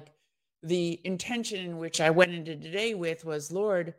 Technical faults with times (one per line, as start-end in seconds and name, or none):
1.94-2.24 sudden gain jump